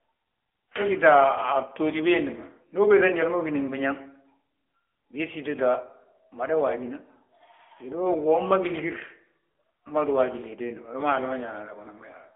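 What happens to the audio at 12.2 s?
At 12.2 s the speech still carries the AMR narrowband mobile codec damage heard across the whole clip. Nothing passes above about 3.5 kHz. A vocal-tract model rebuilds the voice from sparse pulses, which sounds plainly buzzy and synthetic and fits a low mode near 8 kbps.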